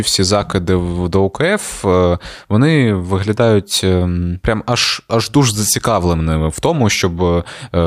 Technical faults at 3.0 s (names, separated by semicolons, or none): none